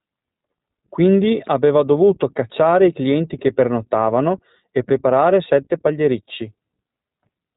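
From start to finish the speech runs through the iLBC codec, and you can plainly hear it. Everything above 3.8 kHz is gone, so it's dull and boxy. The slightly rough, synthetic grain fits 20 ms frames coded independently at a low VoIP bitrate.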